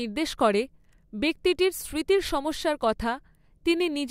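The speech recording has no audible technical faults in its signal chain.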